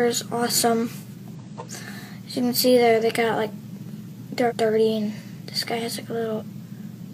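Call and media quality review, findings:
Damaged data in a compressed stream at 1.35–1.40 s, 4.46–4.53 s and 6.37–6.43 s. Brief glitches, about 60 ms each. Corrupt frames in the decoder input; decoder loses sync and resyncs.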